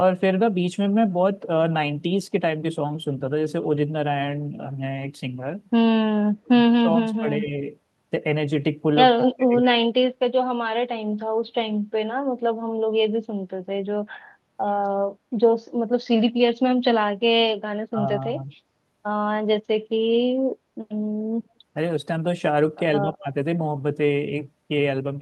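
Speech carried over a call link, with energy stopping near 12 kHz as a call codec would leave it, has short dips where the voice is pulled down, most likely speech suppressed in double talk as the echo canceller ducks the talker while the far side speaks: 6.31–6.5 s (about 30 dB, the deepest), 7.43–7.52 s, 9.38–9.73 s, 17.92–17.99 s and 23.05–23.25 s (about 5–10 dB). On a waveform these appear as brief notches in the envelope, and on a spectrogram as thinned or blanked columns. An echo leak likely lets a faint copy of the voice return about 154 ms late at 6.92–6.97 s (about 20 dB down) and 9.2–9.37 s (about 10 dB down), visible as a weaker, time-shifted repeat of the preceding harmonic pattern.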